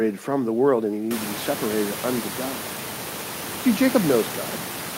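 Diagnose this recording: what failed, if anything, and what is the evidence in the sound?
Nothing failed in this recording. The room noise that rises by about 21 dB at around one second and sits about 12 dB below the speech comes from the room itself, not from any stage of the system.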